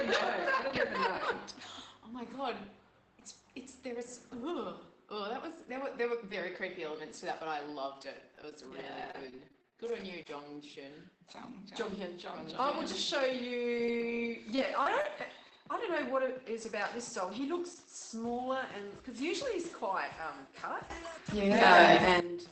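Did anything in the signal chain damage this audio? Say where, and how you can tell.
Yes. The network stage of the call path shows repeated packet loss (robotic sound) from 8.35 to 10.12 s. A chain of short holes, the longest about 22 ms, gets patched by stretching the previous sound. The fills repeat quickly and leave a choppy texture.

Scattered short gaps follow from 13.78 to 15.20 s, also in network delivery. A handful of isolated holes, the longest about 20 ms, were concealed by continuing the last sound. The result is brief ticks and smears rather than sustained robotic choppiness.

A sudden gain jump of about 14 dB hits between 20.90 and 22.20 s. Sound and background noise step up together with no ramp. That points to a level change applied instantly, likely in call processing, for example an automatic gain stage switching abruptly. The Opus audio itself is band-limited to 8 kHz.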